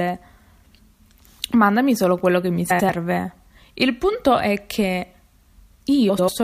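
Frames out of order at 2.70–2.90 s and 6.09–6.29 s: neighbouring 93 ms runs were decoded swapped, so each stretch plays as a garbled flutter.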